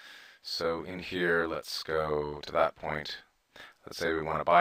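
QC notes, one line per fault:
Throughout: channel delay (doubling). One channel arrives 40 ms behind the other, and the two are folded to mono, so every sound is followed by an equal-level copy, heard as a tight doubling or a short slap. On the waveform, each transient appears twice, 40 ms apart, at matching height. On a spectrogram, the summed copies leave fine comb notches spaced 25 Hz apart, giving sustained parts a finely striped texture.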